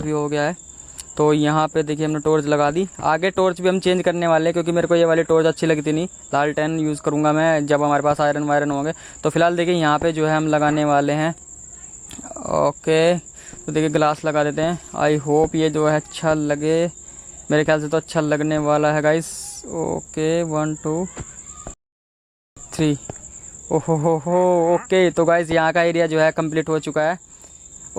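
The audio has a rebuffering stall at 21.74 s: the sound drops to silence until 22.57 s, then picks up exactly where it left off. The player ran dry of downloaded data and waited for more, so nothing's missing, but about 0.83 s of dead air gets added.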